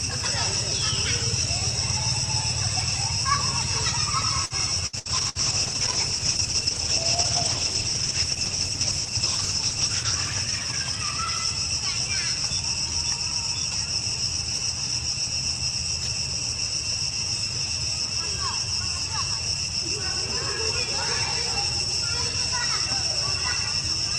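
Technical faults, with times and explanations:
4.45–5.38 s, repeated packet loss (robotic sound): four short holes, the longest 65 ms, are each patched by stretching the preceding sound, so about a quarter of this span is synthetic and choppy. The spectrogram shows smeared, frozen blocks alternating with vertical breaks.
4.87–11.45 s, call bitrate drop: the encoder was starved of bits, which fits a fall from about 32 to 12 kbps, sitting at its lowest for about 5.2 s. Coarser coding makes the sound rough and muffled. The spectrogram's upper band goes dark as the high frequencies are cut.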